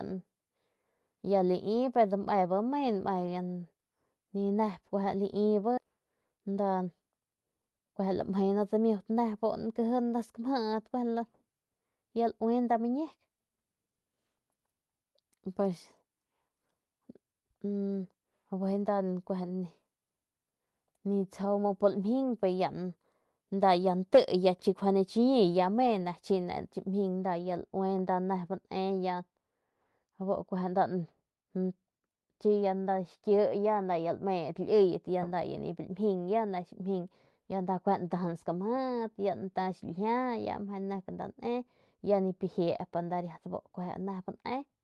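At 5.77 to 5.85 s the speech skips ahead: roughly 0.7 s of audio is missing, likely discarded after the jitter buffer overran while later packets waited. The two sides are spliced almost directly, with only a brief join and no filler, so playback lurches forward abruptly.

From 27.23 s to the end, de-emphasis appears to have been applied wrongly. A treble-cutting filter meant to reverse pre-emphasis acts on audio that never had any, or acts a second time, tilting the response down smoothly to about 8 dB lower at 10 kHz than at 1 kHz. The speech turns noticeably dull and muffled.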